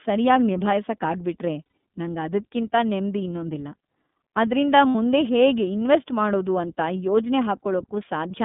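Speech coded with the iLBC codec is narrowband, passing roughly 150 Hz to 3.6 kHz, with a rough, synthetic edge. Unlike a simple low-pass filter, the codec itself adds grain, which fits the 13.33 kbps mode with 30 ms frames. Lost iLBC frames at 1.64–1.73 s, just before "ನಂಗದ್ಕಿಂತ ನೆಮ್ದಿ ಇನ್ನೊಂದಿಲ್ಲ", and at 4.89–4.95 s become a held, buzzy vowel rather than silence. The voice recovers immediately afterwards.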